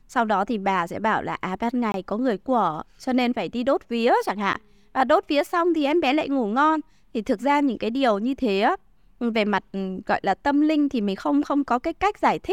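At 1.92 to 1.94 s, after "bảo là à ban", the speech drops into a block of digital silence for about 21 ms. This fits a 1024-sample buffer left unfilled. At 4.53 s, after "đi đốt vía chẳng", an 11 ms gap, fitting 512 samples, ticks.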